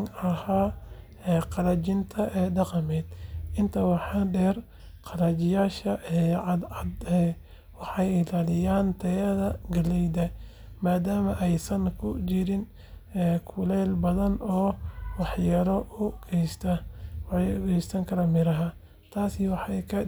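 Listening to this speech recording, nothing technically wrong stood out at any point.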